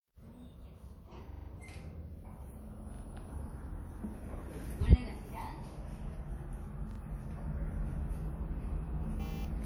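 At 6.91 s there's a repeated buffer: fresh audio arrived late, so one piece of about 43 ms (fits a 2048-sample buffer) played twice more, giving a quick hard-edged stutter.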